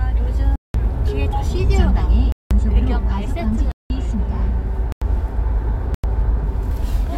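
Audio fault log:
0.56–0.74 s, 2.32–3.90 s (at 2.32 and 3.72): block of digital silence, about 186 ms holes that cut out and back with no fade, likely a missed buffer, which fits an 8192-sample block.
4.92–5.02 s and 5.94–6.04 s: block of digital silence, shorter 93 ms dropouts, half that length, abrupt cut to silence and back.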